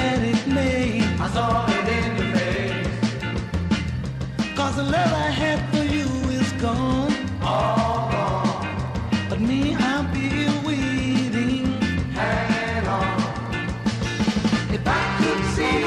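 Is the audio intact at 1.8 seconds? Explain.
Yes, the audio is intact at 1.8 seconds, with no dropout, click, distortion or other fault at that moment.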